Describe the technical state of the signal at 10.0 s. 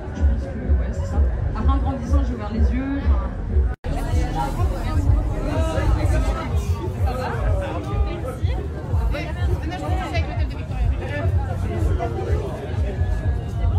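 At 10.0 s the signal is intact, with no audible dropout, distortion, glitch or other technical fault at that point.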